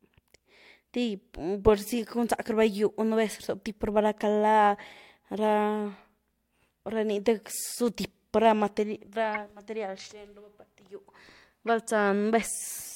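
At 9.34 s and again at 11.67 s there's a short squeaky blip in the speech, a corrupt frame decoded. Damaged bits in a few compressed frames got played anyway, so energy lands at the wrong frequencies. The first chirp is a touch louder.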